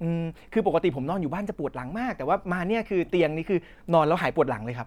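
Nothing in this speech recording jumps out as a technical fault; it just runs along without any glitch worth pointing to.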